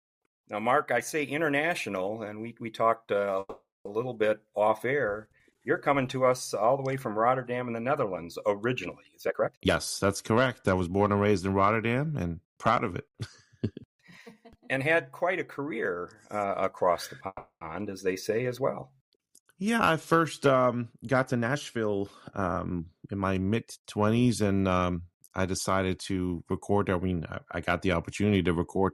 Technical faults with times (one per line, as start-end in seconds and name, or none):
3.39-3.87 call audio freeze
9.27-11.53 jitter buffer speed-up
17.27-17.63 call audio freeze
21.25-23.33 jitter buffer speed-up